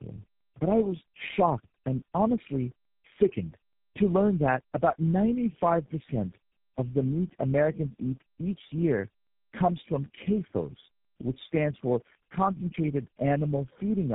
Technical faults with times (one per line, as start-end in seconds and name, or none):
0.00-14.15 tandem speech coding